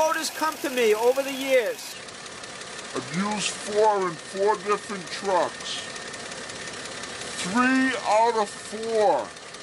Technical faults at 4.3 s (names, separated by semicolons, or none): section at the wrong speed